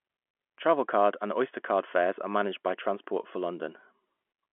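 No technical fault can be heard in this speech recording. It carries the narrow band of a G.711 telephone line, roughly 250 Hz to 3.4 kHz with nothing above 3.8 kHz, and at most a faint trace of coding noise.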